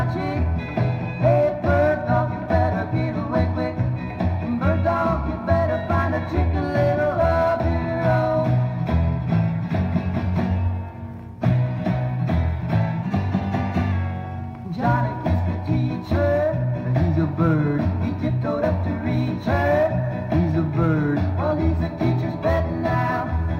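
A drift correction step runs from 13.03 to 13.92 s, where the audio speeds up by 5.55% and rises about 94 cents, close to a semitone, before snapping back. The likely cause is clock-matching software changing playback rate abruptly to rebalance its buffer.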